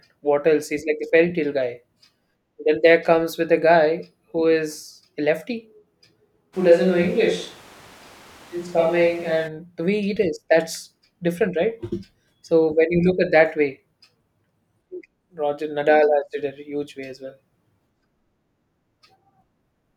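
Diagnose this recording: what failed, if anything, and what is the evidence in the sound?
Capture stage, likely a switch to a distant microphone: from 6.55 to 9.46 s the speech turns roomy, and the spectrogram abruptly loses bass and gains a noise floor about 25 dB down.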